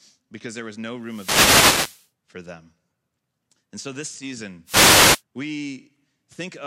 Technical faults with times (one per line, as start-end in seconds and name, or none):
1.01-2.09 wireless microphone noise hit
4.64-5.23 wireless microphone noise hit